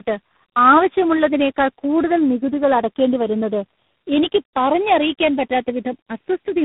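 Tandem speech coding runs through the whole clip. The signal appears to have been decoded and re-encoded by several different speech codecs in succession, about four of them. The character points to CVSD, a low-rate AMR-NB stage, and finally G.726. Each coder works on the previous one's damage, so errors pile up. The speech sounds rough, muffled and warbly, with nothing above 3.8 kHz, duller and grainier than any single codec would leave it.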